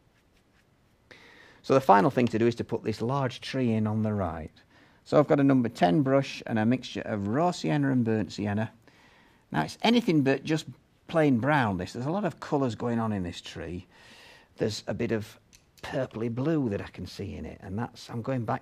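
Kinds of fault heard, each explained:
No technical fault can be heard anywhere in the audio. There is nothing to list under any kind of fault.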